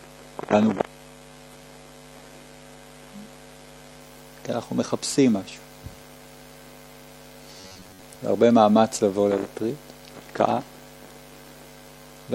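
Adaptive stream starting at a low bitrate, from 0.0 to 4.0 s: the opening seconds sound thin and smeared, with the top end missing or replaced by a synthetic-sounding shimmer and heavier codec artefacts, which points to a low-bitrate HE-AAC version of the stream. At 4.0 s the quality jumps without any gap, as the player moves to a fuller version, likely around 96 kbit/s AAC-LC, once it has measured the connection.

Robotic sound from repeated short buffers, from 7.60 to 8.03 s: the sound turns into a rigid, metallic buzz at 93.8 Hz that still loosely follows the original contour. The likely cause is new audio arriving too rarely, so the software keeps replaying the last fragment of roughly 10.7 ms, one cycle of that buzz, and skips the real material. Repeats fill most of this stretch.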